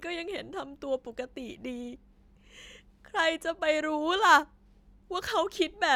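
Two sharp clicks land at 4.17 s and 5.40 s in the speech, each likely dropped samples, where roughly a single sample goes missing and the waveform jumps abruptly.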